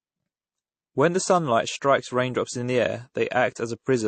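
Transcoding between lossy codecs runs throughout: the speech has no content above 8.5 kHz and stacked artefacts, likely an MP3 stage followed by a low-bitrate AAC encode.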